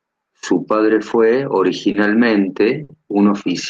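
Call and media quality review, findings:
Short stall from a late packet at 1.91 to 1.96 s, just after "padre fue", and at 2.83 to 2.91 s. Jitter buffer underrun: the sound is held 30 ms, then 60 ms, with a slight buzz or dip. Unlike loss concealment, nothing is skipped; playback resumes in place, running later.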